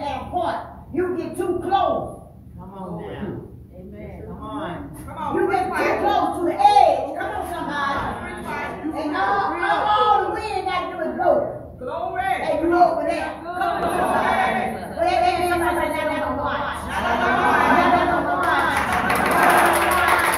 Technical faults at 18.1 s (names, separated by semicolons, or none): doubled audio track